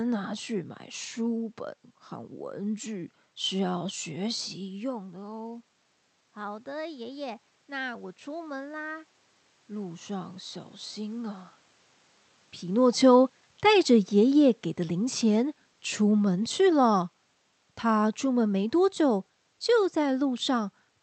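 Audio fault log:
4.61–11.54 s, automatic gain rising: after the talker moves back from the microphone around 4.5 s, the level drops by about 13 dB. The gain control slowly adds about 8 dB over roughly seven seconds, so voice and room noise swell together.
12.70–20.29 s, automatic gain falling: the talker comes closer around 12.5 s and the voice arrives loud. The gain control then backs off by about 7 dB over roughly 7.6 seconds, and the voice and room noise sink together.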